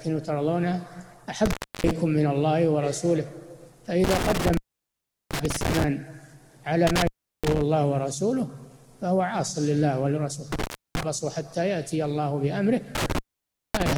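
A loose cable or plug is making intermittent contact, so the signal path repeatedly opens and recloses. Each time, the audio cuts out with crackle at the break and return, leaving faint hiss while the line is open. Dropouts fall at 1.46–1.91 s (open about 0.31 s), 4.04–5.84 s (0.73 s), 6.87–7.61 s (0.36 s), 10.52–11.03 s (0.31 s) and 12.95 s to the end (0.56 s).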